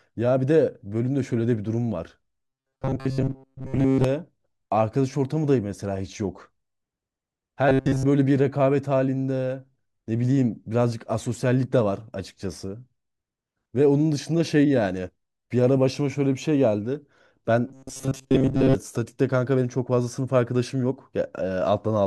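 A rigid, metallic buzz near 133 Hz is heard in the speech from 2.41 to 4.04 s, 7.69 to 8.05 s and 17.68 to 18.75 s, which is robotic sound from repeated short buffers. Likely, most of the audio there was skipped while a chunk of about 7.5 ms was replayed.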